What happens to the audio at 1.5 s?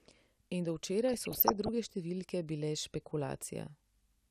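At 1.5 s the speech is inside a burst of DAB burbling running from about 1.08 to 1.69 s, ending just before "številke bile". Bit errors have slipped past error correction into the MP2 data: corrupted samples put short blips of noise in single sub-bands, and corrupted scale factors make sub-bands jump in level for up to a frame. It sounds like burbling over the speech. A spectrogram shows flickering rectangular blocks in isolated bands, and the waveform shows jagged envelope jumps.

Underneath, and across the whole clip, is plainly audible MP2 compression, likely at about 80 kbps. Upper sub-bands drop out and the remaining ones are coarsely quantised, so the sound is dull and gurgly. On a spectrogram this appears as a low ceiling on the high frequencies, with bands blinking on and off.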